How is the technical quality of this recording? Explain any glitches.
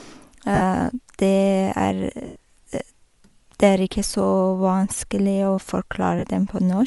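The quality is clearly compromised. The speech carries audible codec damage throughout and three short dropouts.

Throughout, the speech sounds breathy and grainy at the top. This is likely Bluetooth LC3 compression, with the upper spectrum replaced by noise fill.

Lost LE Audio frames occur at 0.55 to 0.62 s, 2.26 to 2.36 s and 6.19 to 6.24 s. The decoder repeats the last spectrum with scrambled signs, so each gap becomes a brief noisy smear.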